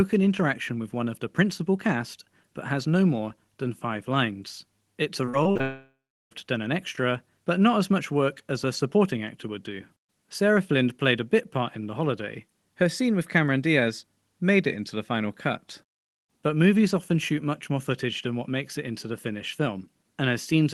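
From 5.25 to 5.61 s there's repeated packet loss with a robotic sound: five short holes, the longest about 42 ms, each patched by stretching the previous sound. Roughly 39% of that stretch is filler, so it comes out choppy.

Right after, from 5.61 to 6.33 s, it sounds like a long network dropout is the likely cause. The receiver keeps extending the last sound as a fading buzz or hiss, then there's about 0.36 s of near-silence before the audio returns with that section missing.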